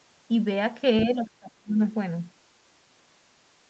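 Other side's voice leaking through appears briefly at 1.01 to 1.05 s in this speech recording: a faint second voice, roughly 15 dB under the main talker, most likely loudspeaker playback picked up by the microphone that the echo canceller failed to fully remove. Speech suppressed in double talk follows from 1.04 to 1.8 s, where the talker's level collapses by as much as roughly 35 dB across most of that stretch. It is likely the canceller, unable to separate near-end speech from echo while both were active, attenuating everything together.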